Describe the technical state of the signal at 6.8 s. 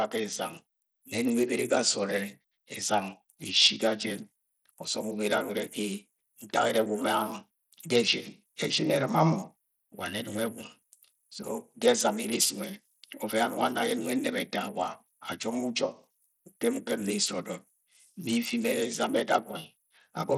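At 6.8 s the speech carries the same coarse coding heard across the whole clip, most likely Bluetooth SBC compression. The treble flickers and thins, and a gritty noise rides on the voice. This fits a starved bit pool near 80 kbps: the upper sub-bands get almost no bits, and the lower ones are quantised roughly.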